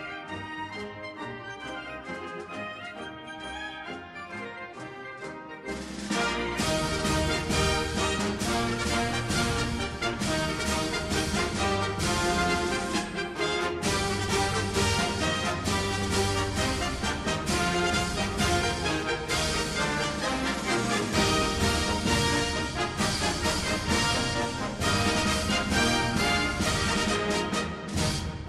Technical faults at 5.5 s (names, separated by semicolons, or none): none